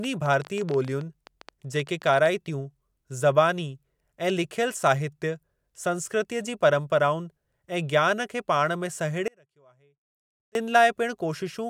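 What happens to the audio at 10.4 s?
An audio dropout to a faint residue runs from 9.28 to 10.55 s. The speech likely breaks off upstream for about 1.3 s, leaving only a faint leak far below normal level.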